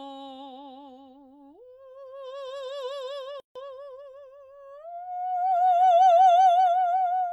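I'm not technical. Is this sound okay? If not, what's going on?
No. At 3.40 s the music stops for about 0.15 s, until 3.55 s. This is a gap at a join of encoded pieces: two separately encoded sections were joined with their silent padding left in. Unlike a dropout, nothing is lost, and the music resumes exactly where it paused.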